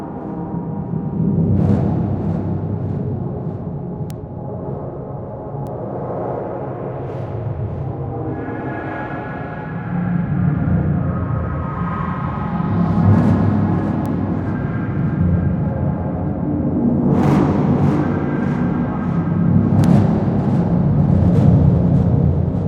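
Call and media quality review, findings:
Four isolated sharp ticks at 4.10, 5.67, 14.06 and 19.84 s, peaking around -11, -17, -11 and -5 dBFS, broadband and unrelated to the audio. Bit error spikes: single flipped bits in memory or a digital link, one to three samples each.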